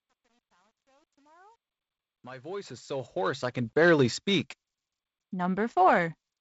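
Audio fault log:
0.00–3.85 s, truncation distortion on a fade. The fade-in sounds gritty. From 0.00 to 2.53 s the quiet start is at its worst. The gain stage rounds to too few levels without dither, which fits about 10 bits, so low-level waveforms become coarse steps.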